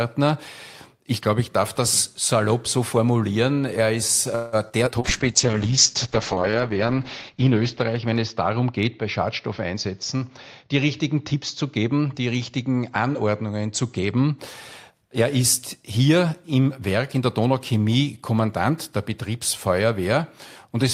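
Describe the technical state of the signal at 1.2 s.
At 1.2 s the signal is intact, with no dropout, distortion, glitch or other fault audible at that moment.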